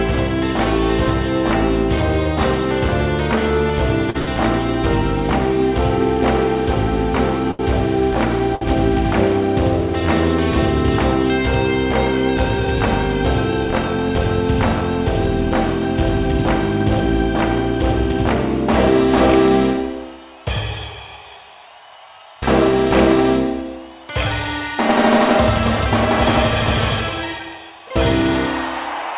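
Short stalls from late packets occur at 4.10, 4.18, 7.51 and 8.55 s. Each time the jitter buffer ran dry, and the receiver stretched the last sound for 44, 87, 78 and 63 ms until the packet arrived, leaving a held sound with a faint buzz or dip and nothing lost. From 12.44 to 14.81 s a jitter buffer speed-up trims short pitch-period pieces, about 70 ms in total, to shed surplus delay. The audio runs at 103% speed with unchanged pitch, over a G.711 band that stops at 4 kHz.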